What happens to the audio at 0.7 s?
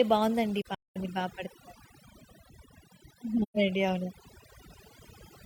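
At 0.7 s the audio falls into AAC frame loss with muting, spanning 0.61 to 0.96 s. The decoder zeroed the spectrum of missing frames, and overlapping windows fade sound out and back in, giving soft-edged holes. About 256 ms vanishes across 341 ms, consistent with roughly six frames, the longest gap around a fifth of a second.

Underneath, overdone noise removal is active here too. Frequency bands lying near the tool's noise estimate are cut far down or off, taking quieter speech components with them. The background drops and breaks up into twinkling specks.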